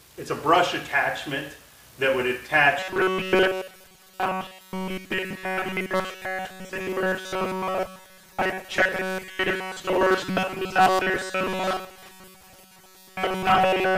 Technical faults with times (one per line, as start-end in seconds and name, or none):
2.80-13.97 robotic sound from repeated short buffers